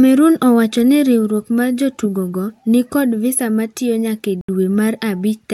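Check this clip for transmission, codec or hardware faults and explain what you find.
One fault is present, a Bluetooth dropout in the speech. From 4.41 to 4.49 s, just after "kod visa matiyo nyake", the sound cuts to silence for about 73 ms, which fits roughly five lost packets. The likely cause is packets missing their delivery deadline to the headphones; playback resumes further on, as though it had continued through the gap.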